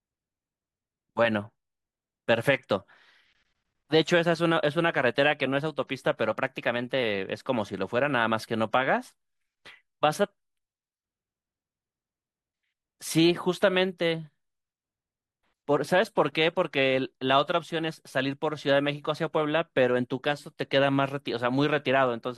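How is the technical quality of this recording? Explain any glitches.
One glitch stands out, a drift correction step from 6.31 to 7.02 s. The speech jumps about 5.6% faster and rises about 94 cents, nearly a semitone, then snaps back. Both speed and pitch shift together, unlike a pitch-only effect, which points to a clock-matching resampler likely stepping its rate to rebalance its buffer.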